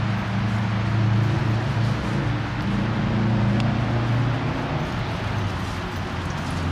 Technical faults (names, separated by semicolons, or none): dropped buffer (overrun)